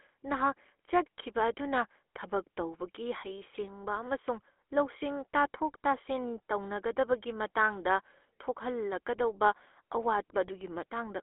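Throughout, the speech has gone through the GSM full-rate codec, which rebuilds the voice from a vocal-tract model driven by sparse, regularly spaced pulses, consistent with a 13 kbps phone channel. This gives a plainly buzzy, gravelly roughness, confined to a 300 Hz to 3.4 kHz band.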